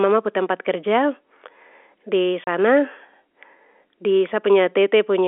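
At 2.44 to 2.47 s there's packet loss filled with silence: a 30 ms hole, likely three 10 ms packets, with hard edges chopping the telephone-band speech.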